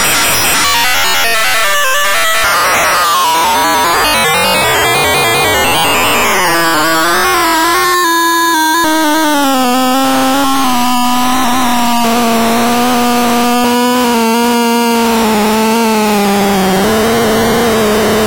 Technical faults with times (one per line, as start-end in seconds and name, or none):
none